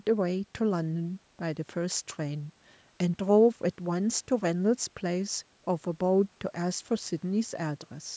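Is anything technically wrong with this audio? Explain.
No, nothing is technically wrong.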